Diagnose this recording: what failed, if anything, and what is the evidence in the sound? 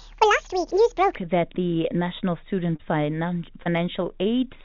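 From 0 to 1.15 s the speech plays 1.8 times too fast, pitch raised by about ten semitones, snapping back to normal just before "that the". This section at the wrong speed likely comes from a clock mismatch at playback or editing. A spectrogram shows widely spaced, raised harmonics and squeezed syllables.

Two short concealed packet losses occur at the network stage, at 2.76 to 2.82 s and 3.63 to 3.69 s, each about 30 ms missing. The receiver extended the preceding sound, then blended back, leaving brief smears. This happens within a call path that stops at 4 kHz, consistent with G.711 mu-law.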